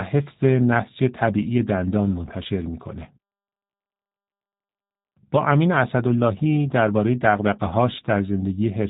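Throughout, G.729 codec damage is plainly audible: the speech, rebuilt from a coarse model at what sounds like 8 kbit/s, is rough and synthetic, with nothing above 3.8 kHz.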